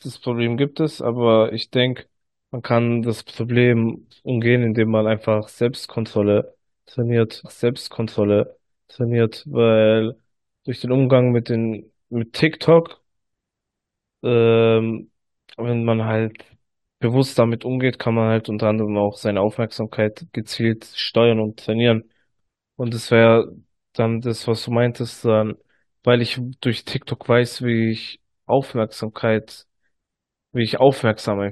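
At 7.44 s the speech jumps back with a small blip and plays a stretch again, so about 2.02 s of the talk is heard twice before it carries on from where it left off at 9.46 s. This is a stream segment repeated: the player fetched or queued the same chunk of the stream a second time and played it through, which stretches the clip by that duplicated portion and leaves an audible seam at the jump.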